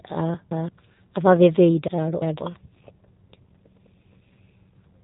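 G.729 codec damage runs through the whole clip, from the start. The speech has been rebuilt from a vocal tract filter, a pitch estimate and a few pulses per 10 ms frame instead of the original waveform, which gives a plainly audible rough, slightly synthetic quality. Nothing passes above about 3.8 kHz, so sibilants and breath lose their brightness, and the character fits an 8 kbit/s G.729A stream.

Chunks out of order occur between 1.88 and 2.39 s. A section of audio lasting about 0.17 s plays after segments that should have followed it, which suggests it arrived or was written two chunks late. No audio is lost, but the sequence is scrambled. There are three hard joins, and the speech across that half-second sounds briefly jumbled and garbled.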